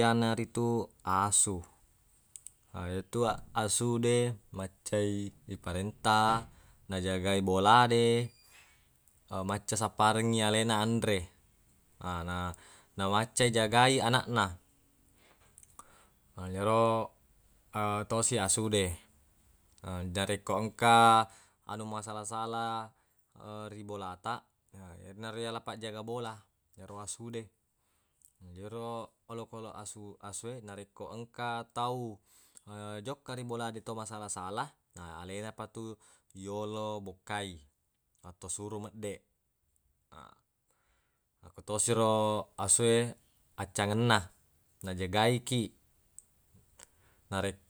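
No technical faults are audible.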